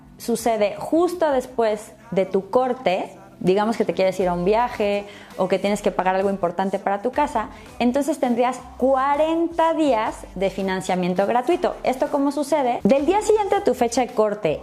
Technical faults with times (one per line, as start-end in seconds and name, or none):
none